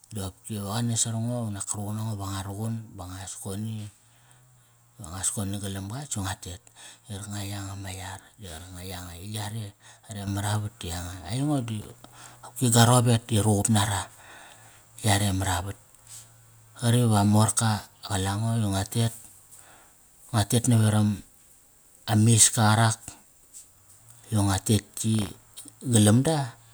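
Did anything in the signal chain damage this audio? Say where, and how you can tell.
Yes. At 10.27 s, speech and background noise jump together by about 6 dB and stay louder to the end. This is a sudden gain jump, likely a digital gain change applied without a ramp. The waveform envelope steps up abruptly.

Processor overload crackle, at the driver/buffer stage, appears from 11.82 to 12.36 s and from 25.15 to 25.73 s. Dozens of missed deadlines, fitting roughly 0.7 ms buffers, repeat old audio with hard edges. On a spectrogram these show as dense broadband vertical streaks.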